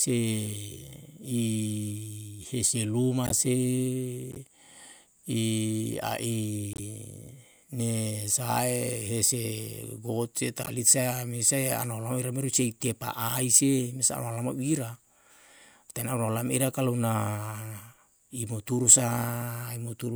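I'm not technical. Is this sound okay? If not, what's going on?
No. The speech has four short glitches, each a corrupt frame decoded. They happen at 3.24 to 3.32 seconds, 4.32 to 4.37, 6.73 to 6.80, and 10.63 to 10.69. Each lasts well under a tenth of a second. They sound like quick chirps or bursts of noise. The audio is stored in small compressed chunks. A few of those chunks got damaged, two or three each time, and were played anyway. So the sound came out wrong for just those moments.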